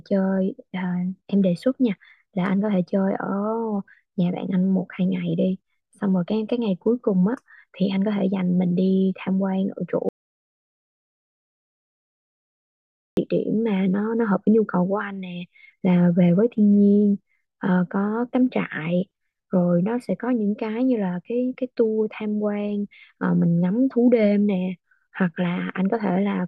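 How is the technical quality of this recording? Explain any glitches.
There's one real glitch, an audio dropout to silence from 10.09 s to 13.17 s. The speech cuts off mid-flow and leaves about 3.1 s of dead digital silence, with no room tone at all. That likely means the input dropped out while the recorder kept writing zeros, so whatever was said there is lost.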